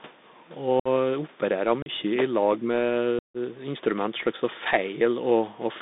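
The whole recording runs through a Bluetooth CVSD headset codec. The line is confined to roughly 200 Hz to 3.7 kHz, which fits a 64 kbit/s one-bit delta modulator. Its coarse step tracking leaves an audible granular hiss, and sibilants and loud bright passages come through scratchy and overloaded.

At 0.80 to 0.88 s comes the first unconcealed Bluetooth headset packet loss. About 60 ms of speech simply vanishes, which points to something like 15 short radio packets dropped with nothing filling the gap. The hole has hard edges, and the speech resumes briefly quieter as the adaptive step rebuilds. A second, shorter dropout of 37.5 ms follows at 1.82 to 1.89 s.

Between 2.60 and 2.67 s the speech dips by about 10 dB for some 70 ms. This is likely speech suppressed in double talk, with the echo canceller ducking the near talker while the far end was also active.

The longest packet loss runs from 3.19 to 3.37 s. 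About 157.5 ms is missing, suggesting around 40 packets lost in a burst, and it is heard as an abrupt cut followed by a subdued restart.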